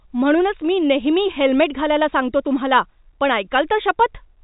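The speech carries no technical faults, and its narrow telephone band, with nothing above about 3.8 kHz, is simply what normal G.711 A-law coding at 64 kbps produces.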